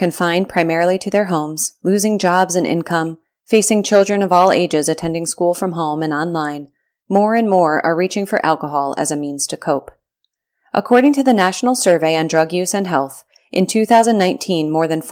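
Speech recording; no technical faults are evident anywhere in it.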